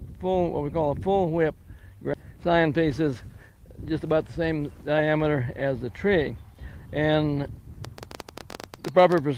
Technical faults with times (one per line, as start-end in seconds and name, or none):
2.23-3.36 jitter buffer speed-up
7.85-9.19 train of clicks